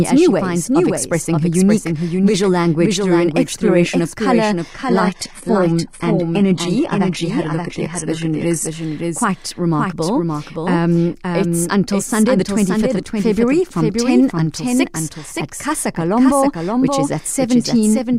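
A speech recording runs with a doubled audio track for its whole length. A second, full-band copy of the speech trails the original by about half a second. It sits roughly 5 dB below the first, so every phrase returns as a dry echo with no room colour or decay. The likely cause is the same signal being captured twice, once through a slower path, or an edit that left two copies out of step. From 4.70 s to 8.70 s, the adaptive stream drops to a lower bitrate. The change is sudden, with no gap. The treble is cut off above 11.8 kHz. Codec artefacts rise. Quality snaps back at 8.70 s. The sound points to a switch from roughly 96 kbit/s AAC-LC to about 16 kbit/s HE-AAC, which fits a slowed connection.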